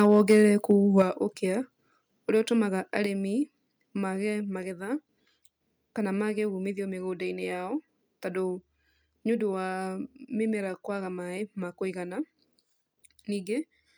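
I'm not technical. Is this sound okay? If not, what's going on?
No. For the first second, up to 1.02 s, the loudest moments have a harsh, crackly edge: microphone overload, likely from the microphone being set too loud so its strongest peaks got chopped off. Unlike steady hiss or static, the roughness appears only on the loudest bits.

At 1.02 s, everything suddenly gets quieter in one jump: a microphone volume step-down, where the software likely turned the input down. A person moving away would fade gradually; here the voice and the background both drop instantly together.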